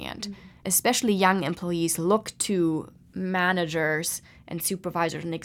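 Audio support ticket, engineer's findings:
Listened through the speech recording and nothing stood out as a fault.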